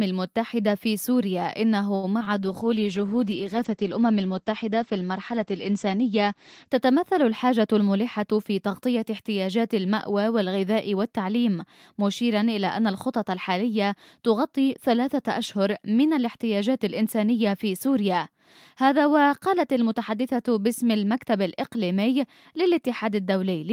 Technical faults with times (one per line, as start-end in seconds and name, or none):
1.95-2.05 short stall from a late packet
2.19-2.28 short concealed packet loss
2.29-2.69 jitter buffer slow-down
2.43-6.76 call bitrate drop
7.48-8.83 jitter buffer speed-up